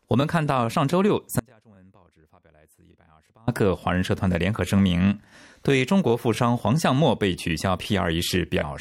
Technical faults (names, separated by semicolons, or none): audio dropout to a faint residue